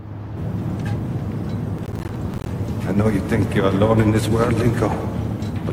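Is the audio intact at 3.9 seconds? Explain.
Yes, the audio is intact at 3.9 seconds, with no dropout, click, distortion or other fault at that moment.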